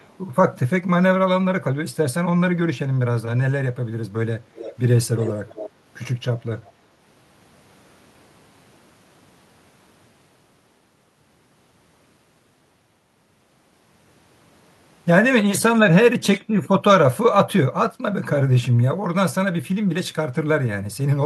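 Echo leak appears four times in this speech clip: faintly from 0.0 to 0.16 s, more plainly from 4.55 to 4.75 s and from 5.17 to 5.7 s, then faintly again from 6.64 to 6.72 s. Each time a delayed copy of the voice trails it by 304 ms, at about -15 dB in the middle two stretches and much weaker, around -35 dB, in the outer ones. The likely cause is a loudspeaker on the far end whose echo canceller let part of its microphone pickup return down the line.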